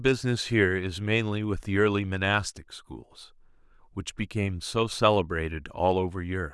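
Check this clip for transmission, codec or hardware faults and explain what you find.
No transmission, codec or hardware faults can be heard anywhere in the speech; the signal arrives continuous and intact throughout.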